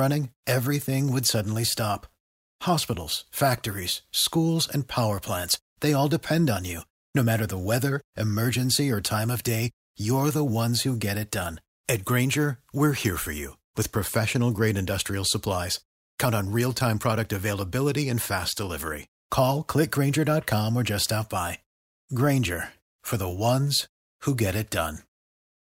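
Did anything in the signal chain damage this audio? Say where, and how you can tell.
Yes: a bit error spike in storage or on a digital link at 16.57 s, just before "time product". Three samples jump to about -30 dBFS and return, giving one sharp tick, a thin full-band vertical line on a spectrogram.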